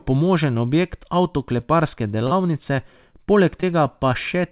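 Short concealed packet loss hits at 2.27 to 2.32 s and 3.61 to 3.63 s. Late packets were patched by extending the preceding sound, leaving brief smears.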